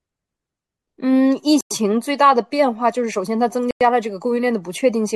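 The clip is speech with two kinds of fault. A gap between chunks opens at 1.61 to 1.71 s and again at 3.71 to 3.81 s. Each hole lasts 100 ms. The two sit 2 s apart, which fits audio delivered in 2-second chunks, with silence inserted at each join. From 2.85 s to the end, a block size mismatch (truncated) adds a buzz at about 46.9 Hz. That rate fits 1024-sample blocks, with the tail of each block dropped because the next stage reads less than was written. The cut repeats at every block boundary, so it sounds as a steady buzz. The speed ratio is 1.0, so the pace does not change.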